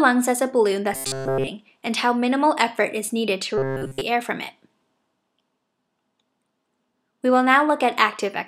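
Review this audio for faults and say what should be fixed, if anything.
A rigid, metallic buzz at 134 Hz takes over the sound from 0.93 to 1.48 s and again from 3.58 to 4.01 s. The likely cause is robotic sound from repeated short buffers: in both spans essentially everything heard is one fragment of about 7.5 ms looped while the real audio is skipped. Preventing it means making sure new audio reaches the playback buffer before the old runs out, for example by enlarging that buffer.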